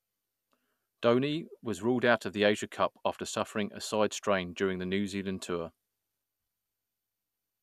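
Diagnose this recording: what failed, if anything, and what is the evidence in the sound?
Nothing failed: no stage in the chain, from capture through to playback, leaves an audible fault anywhere in the speech.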